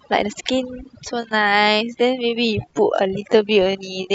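From the start, the speech carries overdone noise removal. The noise reducer was set too aggressively, so individual frequency bands close to its noise estimate are pulled far down or cut out entirely, and the softer parts of the voice are removed with them. The background drops to near silence broken by small twinkling specks. This processing character persists through the whole clip.

At 1.15 s the pace of the speech abruptly slows to about 0.66 times its earlier rate and stays there to the end, yet the pitch does not drop. This is likely a time-stretched section: software lengthened the audio to fill a target duration and preserved pitch by repeating short slices of the signal. The slowed passage drags.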